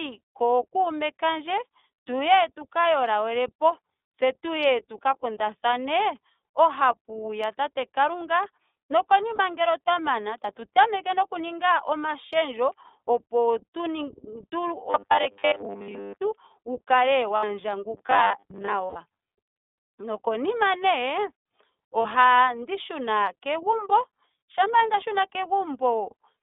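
Throughout, the speech carries the iLBC codec's sound. Everything above 3.6 kHz and below 300 Hz is gone, and the voice has a rough, slightly synthetic edge. That fits the 13.33 kbps mode with 30 ms frames. Unlike a wideband codec, it sounds dull and band-limited.

Lost iLBC frames first appear at 9.36–9.40 s, a single 30 ms gap. The decoder fills it by repeating the last pitch cycle with added noise, so it sounds like a short, held, breathy vowel.

From 14.90 to 16.22 s the voice turns into robotic sound from repeated short buffers. A rigid metallic buzz at 100 Hz follows the words only roughly, because most of the audio is repeated rather than new. The likely cause is new audio arriving too seldom while the last 10 ms is looped. That fixed 100 Hz pitch and the skipped content tell it apart from codec concealment.

Lost frames return at 17.37–17.44 s (60 ms). The buzz recurs at 17.97–18.73 s. 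Lost frames then come back at 18.86–18.97 s (90 ms), where the held vowel fades over the longer gap, and at 22.02–22.06 s (30 ms). After each loss the voice recovers almost at once, since iLBC frames stand alone, unlike the drawn-out buzz episodes.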